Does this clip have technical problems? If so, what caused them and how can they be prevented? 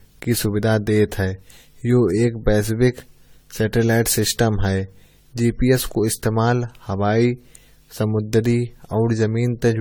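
Yes. Generation loss runs through the whole speech clip: the sound is swirly, smeared and hollow, with consonant attacks blurred, more than a single pass at a rate that fits about 64 kbit/s AAC-LC would give. The likely cause is repeated lossy encoding, roughly seven times over. Each decode and re-encode quantises on a shifted frame grid, so the noise and spectral holes add up. To prevent it, keep a lossless master and encode to AAC only once, at the final step.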